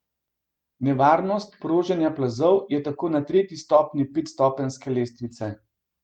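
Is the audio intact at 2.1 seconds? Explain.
Yes, the speech at 2.1 seconds is intact, with no dropout, click, distortion or other fault at that moment.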